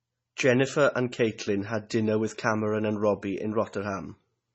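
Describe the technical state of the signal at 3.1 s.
At 3.1 s the speech is passing through MP3 compression, most likely at a starved bitrate, and this holds across the whole clip rather than at that moment alone. The heavy damage fits something around 24 kbps: the encoder discards everything above 8 kHz, so the sound is dull and muffled, and it drops weak frequency lines that flicker in and out between frames, giving a watery, swirling texture, metallic chirps on s sounds, and smeared onsets.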